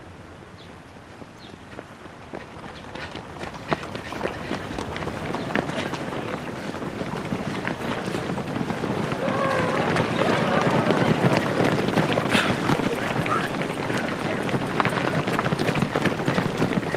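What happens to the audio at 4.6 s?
Nothing goes wrong at 4.6 s; the audio carries on intact through that moment with no audible fault.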